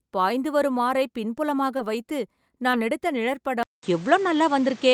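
At 1.77 to 1.81 s and again at 2.71 to 2.75 s there's short concealed packet loss: about 20 ms of the call arrived too late for the decoder each time, so the receiver stretched the last bit of voice across the gap and then faded back into the real signal. You hear it as a tiny smear or wobble in the speech, over in a blink, and a quick consonant can get swallowed in there.

Then at 3.63 s the speech drops out for about 200 ms and comes back sounding different through to the end. Most likely the input switched to a poorer device. Nothing comes through above 8.4 kHz, so the voice turns duller and a bit boxy, the level shifts by roughly 5 dB, and there's a new noise floor sitting around 30 dB under the voice.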